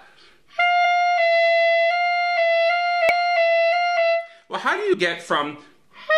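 Three quick glitches pop out of this audio, at about 0.84 s, 3.09 s and 4.93 s. Each is a tiny chirp or blip only around 15 ms long, the signature of damaged data in a compressed stream. Some bytes in the encoded file went bad at those spots, so the decoder couldn't make sense of the frames there, lost sync for a moment and spat out a burst of garbage before latching onto the next good frame header.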